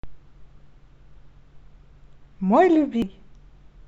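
A short speech recording carrying one fault: damaged data in a compressed stream, from 3.02 to 3.06 s. For those roughly 30 milliseconds the decoder is handed corrupted frame data, misreads it and has to resynchronise, so a brief chirp, squawk, click or short hole interrupts the speech. On a spectrogram it shows as a narrow vertical disturbance breaking the surrounding formants; the waveform shows an abrupt, jagged discontinuity at that point.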